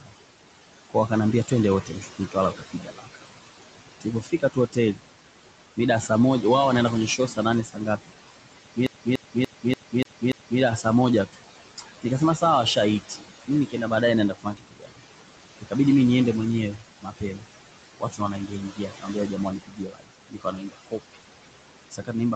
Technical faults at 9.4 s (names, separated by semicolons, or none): noise suppressor artifacts; speech cut by the noise suppressor; CD stuck on one turn